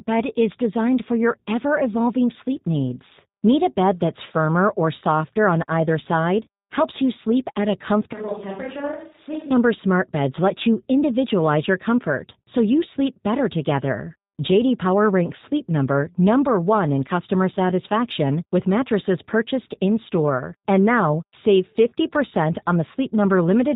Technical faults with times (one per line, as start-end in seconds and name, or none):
0.00-23.75 G.729 codec
8.13-9.51 switch to a distant microphone